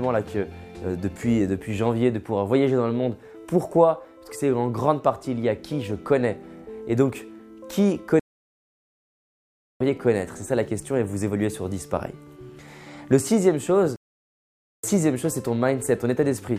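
At 8.20 s the sound halts in mid-flow and stays silent for about 1.61 s, until 9.80 s; a second playback stall follows at 13.96 s, silent for about 0.87 s until 14.84 s. These fit the player likely running out of data or having its thread blocked, so output stopped until it recovered. Unlike a brief dropout lasting milliseconds, each silence runs for a noticeable stretch before the sound continues.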